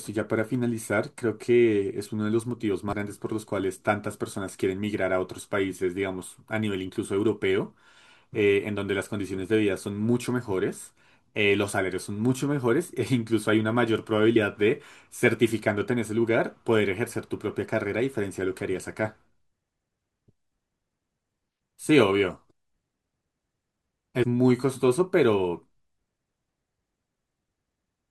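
Compressed frames skipped at 2.93 s, 14.33 to 14.36 s and 24.22 to 24.24 s: whole frames never reach playback, so the speech jumps ahead by roughly a tenth of a second, slightly less at 14.33 s.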